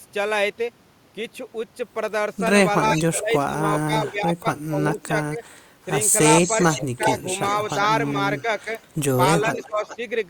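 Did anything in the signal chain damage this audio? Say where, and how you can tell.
Yes. Both faults sit in the call processing stage.

The speech dips while the far side is also talking. This happens from 2.93 to 5.88 s, where roughly a second and a half is pulled down by up to about 20 dB. It recurs at 6.63 to 7.8 s, briefly at 8.42 to 8.67 s, and at 9.48 to 10.0 s. This is likely speech suppressed in double talk. The echo canceller mistook the talker for loudspeaker echo and attenuated both.

A faint delayed copy of the speech also appears. It runs from 2.95 to 3.55 s, 4.91 to 5.49 s, 6.43 to 9.0 s and 9.55 to 9.97 s. The delay holds steady between 395 and 408 ms. The copy sits about 10 to 20 dB under the speech and is loudest in the long middle stretch. That fixed delay likely points to echo leak. A loudspeaker's sound reached a microphone, and the canceller did not fully remove it.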